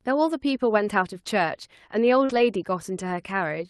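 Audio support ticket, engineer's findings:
Short concealed packet loss, 2.25–2.31 s: brief smear where roughly 40 ms of audio never arrived; jitter buffer extended the preceding sound, then crossfaded back.

Lost packet rebuilt from error correction, 2.29–2.39 s: about 60 ms rougher and noisier, no gap; decoder played Opus in-band FEC copies, consistent with three 20 ms frames, over a 12 kHz-limited Opus path.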